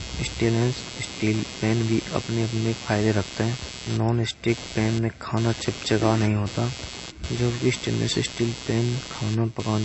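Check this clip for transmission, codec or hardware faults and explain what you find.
Two faults run through the whole speech clip: a buzzing interference from the computer and plainly audible compression damage.

Computer activity noise: for the full length, a rough buzz pulsing at around 150 Hz sits only about 15 dB below the speech and swells and fades independently of it. Changing processor, graphics or mouse load is shifting the audio circuit's shared ground, which injects this chirpy scratching.

MP3 compression: throughout, the speech sounds watery and swirly, with metallic smearing on s sounds and attacks, and nothing at all above 7.9 kHz. The likely cause is MP3 encoding at a low bitrate, consistent with roughly 32 kbps. Short of bits, the encoder chops the treble at a fixed frequency and drops weak frequency lines that flicker on and off from frame to frame.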